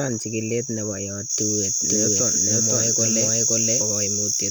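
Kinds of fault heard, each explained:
Doubled audio track: from about 1.88 to 3.82 s a second copy of the speech runs roughly half a second behind at about equal level, full-band and dry, starting and stopping abruptly, likely a second capture path; unlike echo or reverb, nothing decays or repeats further.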